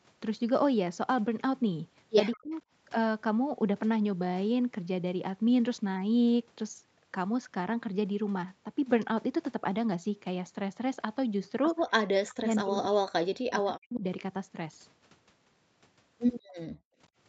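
At 2.33 to 2.37 s a faint, delayed copy of the speech flickers through, sitting about 20 dB below the talker and trailing it by roughly 182 ms. This is an echo leak. The far end is likely playing the call on a loudspeaker, and its echo canceller let a brief scrap of what its microphone picked up slip back into the return path.

Straight after, from 2.38 to 2.51 s, the talker's voice sinks sharply, by something like 35 dB at its deepest, for about 150 ms. The same thing happens for much longer between 12.15 and 14.03 s, where around 1.5 s of the speech is pushed down in pieces by roughly 40 dB. This is speech suppressed in double talk. Both sides were talking at once, and the echo canceller, unable to tell the near talker from loudspeaker echo, likely turned everything down together.

Near the end, the room sound drops out twice: from 16.44 to 16.56 s by about 31 dB, and from 16.72 to 16.98 s by about 40 dB. 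Each dropout lasts only a fraction of a second, and the background comes straight back afterwards. This is background gated by the echo canceller, which clamped the microphone hard while the loudspeaker was active and released it once playback stopped. Throughout, the audio tops out at 8 kHz, which is the band limit of the Opus call path.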